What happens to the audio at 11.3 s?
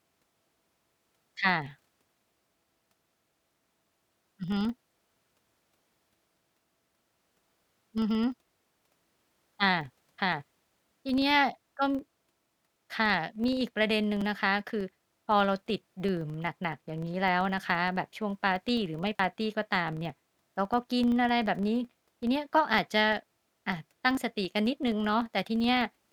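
At 11.3 s the speech carries a regular tick buzz at about 23.4 Hz from a filter restarted on every block, heard throughout the clip. Each block starts the filter from silence, fitting 2048-sample blocks. Unlike buffer-underrun clicks, the ticks are evenly spaced and rise and fall with the speech level.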